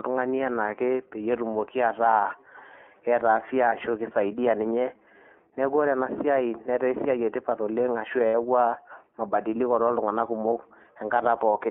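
From start to finish the speech runs through the iLBC codec, and the damage is plain. The sound is boxed into a phone band of roughly 300 Hz to 3.4 kHz, so there's no air on top and little body below. Each chunk's excitation is coded on its own, which gives the slightly rough, synthetic grain you hear throughout. The character fits the 30 ms frame mode at about 13.3 kbps.

At 3.68 s there's a short dropout of about 30 ms, consistent with a single lost iLBC frame. The decoder covers it by repeating the last pitch cycle with some noise mixed in, so it comes across as a brief buzzy hold on the vowel. Right after "tipat oleng' ashu", at 8.28 s, a longer 60 ms gap sounds like two frames lost back to back. It comes across as a held, breathy vowel. Both times the speech snaps back to normal almost immediately, because iLBC frames don't depend on the ones before them.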